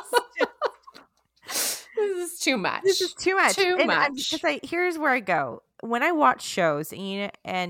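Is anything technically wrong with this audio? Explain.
No, nothing technically wrong can be heard in this speech recording. There are no faults to point to anywhere in the clip.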